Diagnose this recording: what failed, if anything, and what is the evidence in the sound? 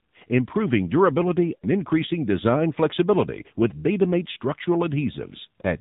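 AMR narrowband mobile codec, throughout the clip, at the codec stage. The speech has no content above 4 kHz, so sibilants are dull and muffled. The voice sounds buzzy and synthetic. Those are plainly audible artefacts of a vocal-tract model driven by sparse pulses with very few bits. The coarseness points to a low AMR-NB mode, consistent with roughly 7.4 kbps.

Lost AMR speech frames, at 1.56 to 1.65 s and again at 4.32 to 4.36 s, at the network stage. The first gap falls between "improving durability" and "increasing design flexibility with". Sound there is smeared and drawn out, then sags in level before recovering rough and weak. The decoder repeated its last good pitch and filter settings with decaying gain. The gaps last about 60 ms and 40 ms, which fits three and two dropped 20 ms frames.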